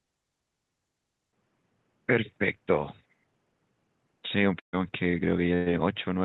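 From 1.31 s to the end the speech turns dull and boxy, with nothing above 3.8 kHz, a level drop of roughly 10 dB, a faint new background hiss and a 20 ms gap at the change. This is likely an input switched to a poorer device mid-recording.

At 4.59 s and again at 5.55 s the sound briefly smears into a held, fading sound, then jumps ahead. Each is a burst of packet loss. About 140 ms and then 120 ms of audio are lost. The receiver papered over each gap by extending the last sound, and the first one faded to near silence before the audio resumed.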